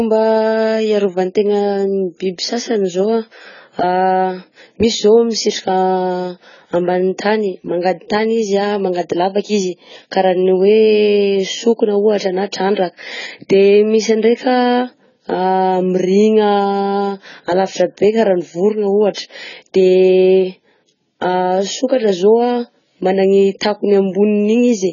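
Heavy lossy coding, likely AAC compression at a very low rate consistent with about 16 kbps, has stripped this speech recording of everything above 7 kHz and coarsely quantised what remains, so it sounds dull, smeared and warbly throughout, with fizzy sibilants. Pre-echo appears where the transform codec spread its block's quantisation noise ahead of sharp onsets. A short hiss of about 28 ms precedes the attack at 12.74 to 12.77 s, and one of 27 ms precedes it at 19.15 to 19.17 s, softening both attacks.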